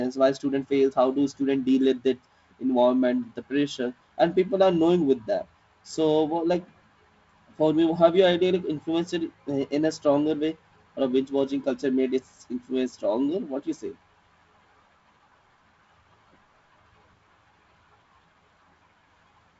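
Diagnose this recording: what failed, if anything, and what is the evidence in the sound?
Nothing in the chain has failed: the speech comes through G.722 wideband telephone coding, with content ending near 7.7 kHz, a faint hiss in the upper band, and a slightly noisier lower band that points to the codec's 48 kbit/s mode, all of which is the expected character of that codec.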